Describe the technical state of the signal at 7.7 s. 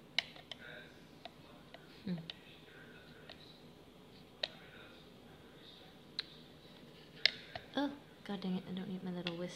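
At 7.7 s the signal is intact, with no audible fault at that point.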